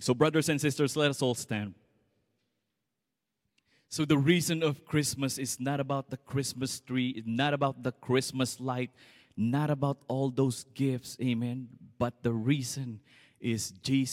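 CD scratch ticks appear between 8.23 and 8.72 s: three short, regular clicks spaced evenly across that half second, the longest lasting only a millisecond or two. A blemish on the disc surface corrupted more data than the player's error correction could rebuild, once per revolution, so the player patched or muted the damaged samples each time the spot passed under the laser. The result is a brief, rhythmic ticking laid over the speech.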